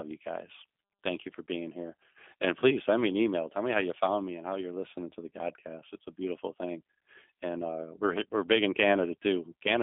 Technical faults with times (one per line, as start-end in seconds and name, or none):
0.00-9.82 G.729 codec